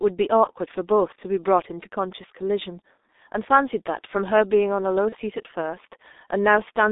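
From start to finish, the speech carries the sound of the G.723.1 codec. The line passes roughly 250 Hz to 3.7 kHz, so the top is cut away and the speech sounds muffled. The damage is heavy. Voices turn hoarse and consonants smear, because the coder rebuilds speech from a coarse model that it updates only every 30 ms. The thin, rough texture fits its 6.3 kbit/s mode.

From 0.44 to 0.50 s comes the first VoIP packet loss concealed by the speech codec. A short gap of about 60 ms fits a single lost 30 ms frame. The decoder fills it by repeating its last pitch and filter at falling gain. The result is a brief stretched sound, a buzzy tone or coloured noise that fades. The same thing happens from 5.10 to 5.16 s, again as a short stretched sound that fades.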